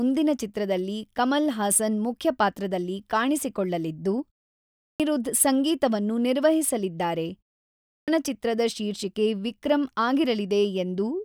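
Speech with a clipped start after a pause: about 0.21 s is lost at 4.79 s just before "ಸಂಗೀತವನ್ನು ನಿರ್ವಹಿಸಲಿದ್ದಾರೆ", and 0.22 s at 7.86 s after it. Each time the output device is slow to wake from silence.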